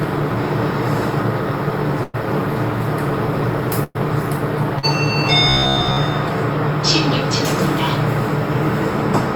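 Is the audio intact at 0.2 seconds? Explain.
Yes, the audio is intact at 0.2 seconds, with no dropout, click, distortion or other fault at that moment.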